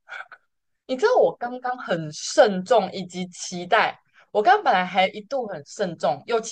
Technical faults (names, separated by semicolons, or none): none